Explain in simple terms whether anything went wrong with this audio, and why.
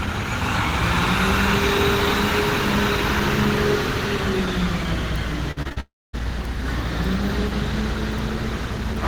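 Two things went wrong, close together. From 5.51 to 5.78 s there is repeated packet loss (robotic sound). Four short holes appear, the longest 50 ms. Each is patched by repeating the last sound. About half that stretch is patched, so it sounds choppy and mechanical.

Right after, from 5.80 to 6.15 s, the sound stretches into a fading buzz. Then it goes silent for about a quarter of a second. It returns with roughly a third of a second missing. This is likely a long network dropout.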